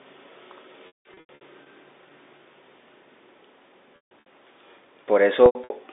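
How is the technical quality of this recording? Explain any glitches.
Three short glitches break up the speech, which comes through the narrow telephone band of about 300 Hz to 3.7 kHz set by G.711 coding. Packet loss with pitch repetition occurs at 0.87–1.41 s, 3.96–4.26 s and 5.46–5.70 s. Brief gaps sound like a held, buzzy note and longer ones fade into silence, because the receiver repeated the last pitch period to cover lost packets, with runs up to 150 ms.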